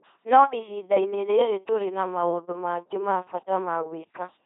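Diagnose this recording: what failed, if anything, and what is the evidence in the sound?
Codec stage: the whole speech clip has that buzzy robot quality of an LPC-10 vocoder, with nothing above 3.8 kHz. Every moment is either pulse-driven or noise-driven, which fits a 2.4 kbit/s rate.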